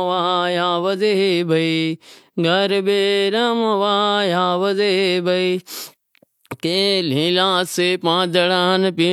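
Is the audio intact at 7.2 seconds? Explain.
Yes, the speech at 7.2 seconds is intact, with no dropout, click, distortion or other fault at that point.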